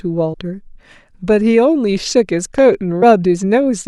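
At 0.33 s the speech skips forward with a short smeared blip: compressed frames skipped, roughly 50 ms of audio lost. The jump fits two frames of a 24 ms codec, dropped as missing or damaged, with overlap softening the join. At 2.58 to 2.61 s a single loud pop sits on top of the speech, peaking about 5 dB above it, likely from a switch, plug, static or driver glitch. At 3.01 s a second skip drops roughly 70 ms, consistent with three frames.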